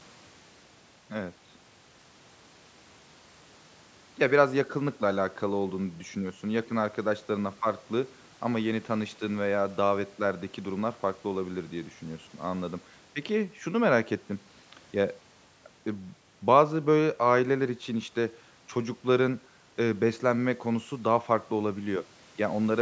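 Nothing stood out on listening to this speech recording, which carries the usual sound of a call's microphone processing, with its lowest bass trimmed and nothing above 8 kHz.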